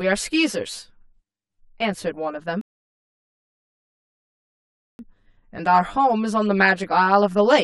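From the start and throughout, the speech has a hollow, phasey colour from channel delay (comb filtering). One channel trails the other by around 10 ms, so summing to mono carves fixed notches starting near 50 Hz and repeating every 100 Hz or so. Unlike room reverb, nothing rings on after sounds end.

From 2.61 s to 4.99 s a rebuffering stall cuts the audio to silence for about 2.38 s. The speech then resumes exactly where it stopped. Unlike a dropout, nothing is skipped. The pause only adds time.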